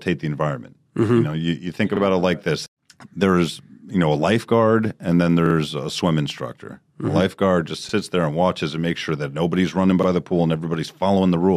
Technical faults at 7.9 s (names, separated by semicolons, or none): repeated buffer